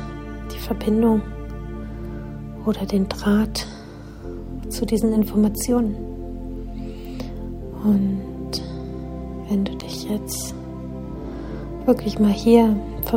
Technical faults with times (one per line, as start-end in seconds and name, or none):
9.80 block of digital silence